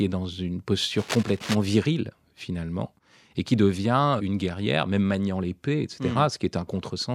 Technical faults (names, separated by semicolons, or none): cable scratch noise